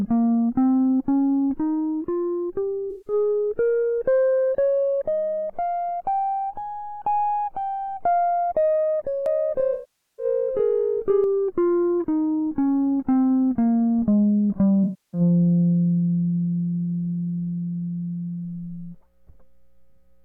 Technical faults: AAC frame loss with concealment; doubled audio track

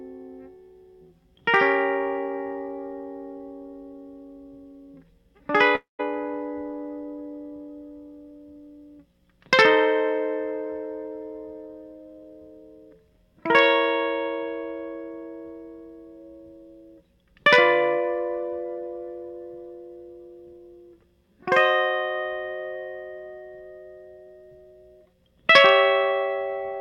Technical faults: long network dropout

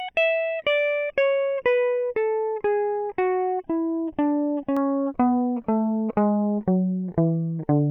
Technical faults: channel delay (comb filtering)

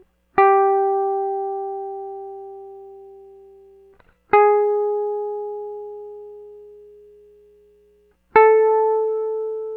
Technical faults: none

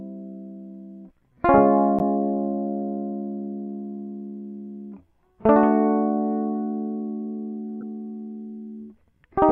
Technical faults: corrupt frame decoded

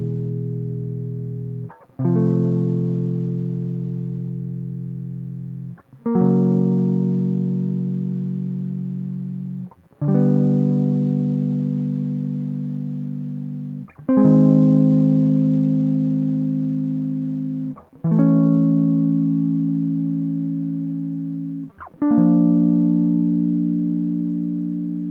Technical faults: none

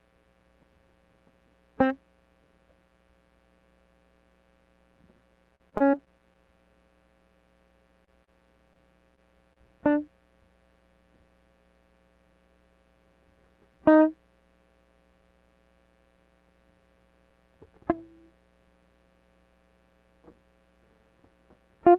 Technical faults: repeated packet loss (robotic sound); scattered short gaps

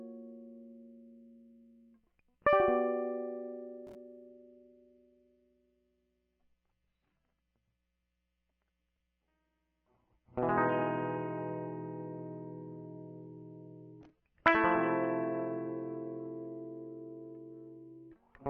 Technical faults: adaptive stream at a lower bitrate

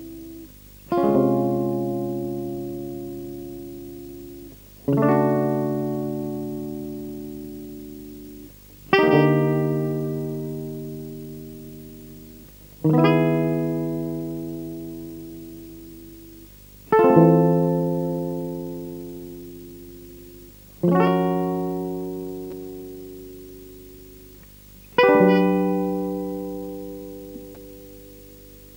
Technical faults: video or display buzz

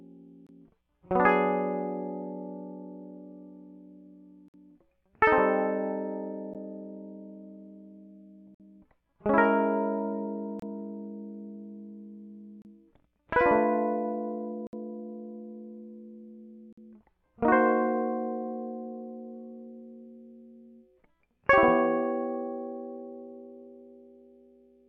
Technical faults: gap between stream segments

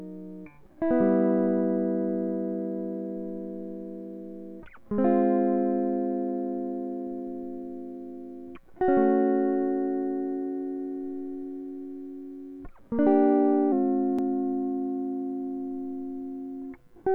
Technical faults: wrong sample rate

